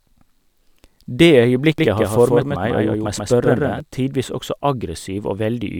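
From 1.78 s to 3.80 s, just before "tidvis også", a doubled audio track appears: a second full-band copy of the speech sits roughly 150 ms behind, around 5 dB quieter, with no reverb tail. It likely comes from a slower duplicate capture path. On a spectrogram, every syllable shows a twin offset in time, starting and stopping abruptly.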